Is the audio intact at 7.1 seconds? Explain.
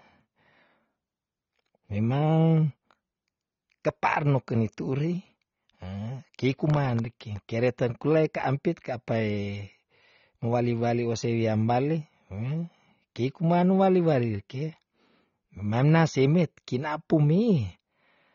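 No. Processor overload crackle runs from 6.70 to 7.50 s. The processor repeatedly misses its deadlines for very short buffers, under a millisecond each, and each missed buffer drops out as a tiny silent gap with hard edges. Around thirty such gaps in that span produce a gritty crackle over the speech.

Throughout the clip there is also plainly audible dullness and smearing, with nothing above 7.5 kHz. That is likely AAC compression, AAC-LC at a low bitrate around 24 kbps, where the encoder lowers the cut-off and quantises the spectrum coarsely.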